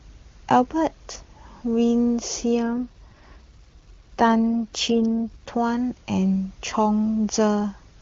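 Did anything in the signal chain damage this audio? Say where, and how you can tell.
Yes: an AMR rate drop from 2.65 to 5.49 s, at the network and codec stage. The speech turns rough and synthetic in that span while the bandwidth stays the same and there is no gap, and the clean wideband sound of the AMR-WB codec returns afterwards. A weak radio link pushed the encoder to a lower mode so bits could go to error protection. The added roughness fits a step down from 23.85 to 8.85 kbit/s.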